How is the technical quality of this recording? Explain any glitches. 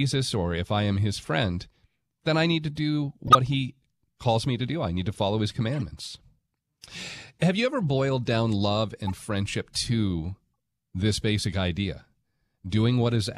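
The speech has three brief decoding glitches. A corrupt frame was decoded at 3.28 to 3.35 s, between "I need to do" and "he calls me to"; at 5.76 to 5.82 s, right after "need to follow his"; and at 9.07 to 9.21 s, between "ever boiled down love" and "to this basic idea". Each time, a few damaged compressed frames were played with scrambled gains and codes, spraying energy into the wrong frequencies. Each is heard as a chirp, squeak, blip or burst of noise. The first is loud. The later two are fainter.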